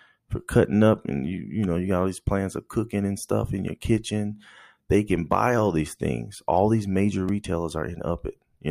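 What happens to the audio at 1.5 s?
Nothing goes wrong at 1.5 s; the speech carries straight through that moment with no dropout, click, distortion or other fault.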